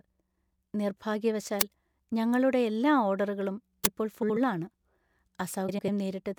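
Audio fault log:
1.61 s and 3.85 s: uninitialised buffer. Two loud cracks, each about 11 ms, where leftover memory played as sound. The length fits a 512-sample buffer.
4.22 to 4.37 s and 5.68 to 5.89 s: frames out of order. Neighbouring chunks of about 72 ms and 96 ms swapped places, giving a garbled flutter.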